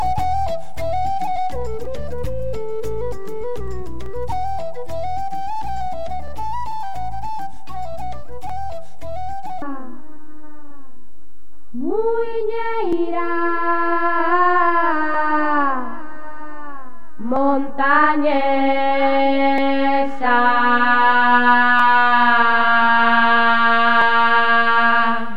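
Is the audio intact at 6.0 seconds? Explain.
No. 6.0 s falls inside a run of clock drift buffer slips lasting from about 1.85 s to 24.02 s. A click recurs every 2.22 s, about ten times in all. The likely cause is two devices running on separate clocks that disagree by a few hundred parts per million. The buffer between them gradually fills or drains until a block of a few tens of samples is dropped or repeated, and each of those jumps is heard as a click.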